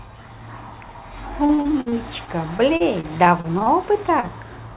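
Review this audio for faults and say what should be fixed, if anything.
From 1.46 to 3.69 s the speech turns choppy and robotic: repeated packet loss, with a dozen or so dropouts, the longest about 52 ms, each papered over by stretching the previous sound, so roughly a sixth of that stretch is synthetic. A steadier network path and a jitter buffer sized for the observed jitter would prevent this.

At 4.20 to 4.26 s there is a brief smear: a short concealed packet loss, about 30 ms that arrived too late and was filled from the preceding audio before blending back. Forward error correction or redundant packets would let the receiver recover such single losses.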